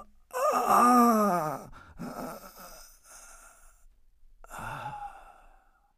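No technical faults can be heard anywhere in the audio.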